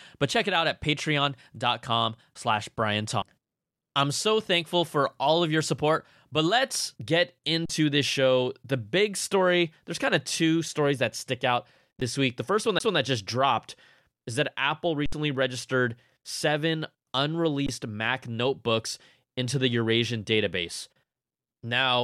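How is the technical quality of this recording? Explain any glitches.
The recording has two kinds of glitch: CD skips and underruns with held samples.

CD skip: at 3.22 s and 12.79 s, before "just dropped is that", the laser jumped tracks. A brief mute and tick appear as a short waveform gap where the sound resumes elsewhere.

Underrun with held sample: at 7.66–7.70 s (between "let's get" and "this show"), 12.01 s (before "this week"), 15.06–15.13 s and 17.67–17.69 s, the buffer emptied for 10 to 67 ms. The converter held its last value, so the waveform shows a flat line and the spectrogram goes blank. Audio was lost during each gap.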